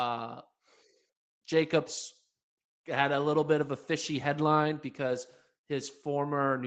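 No technical faults are audible.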